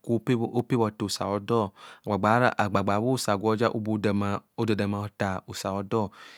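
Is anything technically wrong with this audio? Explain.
Yes. The speech carries three isolated sharp clicks, at 0.60 s, 2.60 s and 4.63 s, most likely from dropped samples. Each time, a tiny stretch of the stream, a fraction of a millisecond, goes missing, so the waveform jumps straight to a later value and the discontinuity snaps out as a click, a thin vertical line across the spectrum. Unlike a dropout, no sound audibly disappears and there is no gap or stutter, only the instantaneous tick.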